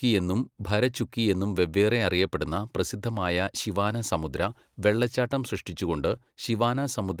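Clock drift between sender and receiver runs through the whole clip: the sending side's audio clock is slow by roughly 3 percent relative to the receiver's. Because samples arrive a little slower than they are played out, the receiver's jitter buffer keeps drifting toward empty. To cope, the playback side has to stretch the incoming speech rather than let the buffer run dry, so the timing of the audio never sits quite steady.

Repeated timing corrections follow from that drift, from 0.62 s to 7.03 s. Throughout this stretch the receiver keeps repeating short pieces of the signal to stay in step with the slower sender, all in the same direction and at uneven spacing. The speech plays at about 97 percent speed, and the inserted material adds up to around a fifth of a second. Each edit is small, and the tempo runs slightly slow.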